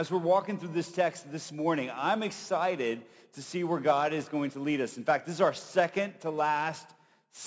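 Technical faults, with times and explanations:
No technical faults can be heard anywhere in this recording.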